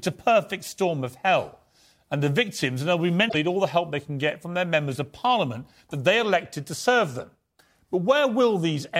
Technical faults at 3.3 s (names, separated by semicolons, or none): damaged data in a compressed stream